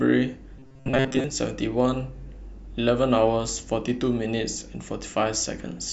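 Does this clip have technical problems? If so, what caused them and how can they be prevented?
Yes. Robotic sound from repeated short buffers runs from 0.57 to 1.24 s. The speech turns into a rigid metallic buzz at 133 Hz, likely because new audio arrived too seldom and a fragment of about 7.5 ms was looped over most of that stretch while the real audio was skipped. A larger playback buffer and steadier audio delivery from the source would prevent it.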